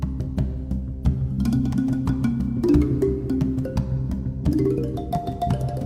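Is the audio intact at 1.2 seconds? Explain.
Yes, the audio is intact at 1.2 seconds, with no fault present at that moment.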